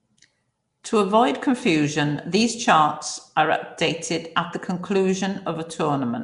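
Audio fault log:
Throughout, Nellymoser compression, likely: rough hissy halo and smeared underwater speech, nothing above about 10.6 kHz, starved bands filled with noise, fitting a roughly 44 kbps stream.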